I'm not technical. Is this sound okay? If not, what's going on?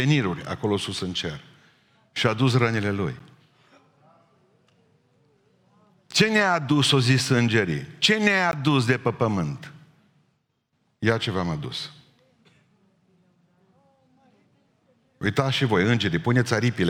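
No. The speech has three tiny breaks: at 3.19 s just after "a dus rănile lui", at 8.51 s just before "de pe pământ", and at 15.26 s just before "și voi". Each is a block of digital silence, where about 12, 17 and 5 milliseconds of sound were replaced by total silence. The first and last are so short they come across as ticks, while the 17 millisecond one is long enough to be a brief hole in the sound.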